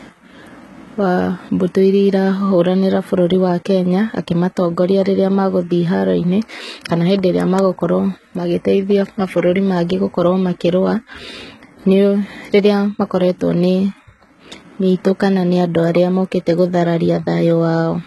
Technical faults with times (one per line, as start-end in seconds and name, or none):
0.00-18.06 HE-AAC compression